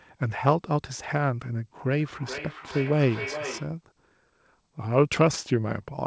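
Speech, with feedback echo between two devices from 2.0 s to 3.77 s: the sound returns roughly every 0.4 s, peaking about 10 dB below the direct speech and getting thinner and more ringing with each pass. A second device in the room is replaying the call and the first microphone picks it up, which that device's echo canceller can't remove. A spectrogram shows fainter copies of each burst stacked at even spacing, and the waveform shows decaying repeats trailing the speech, all below the band-limit near 8 kHz from the call codec.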